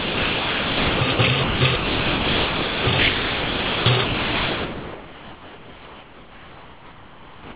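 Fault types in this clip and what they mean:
Sound dropped by the voice detector: the audio keeps giving way to steady filler noise from the very start, likely the sender's detector mistaking it for background.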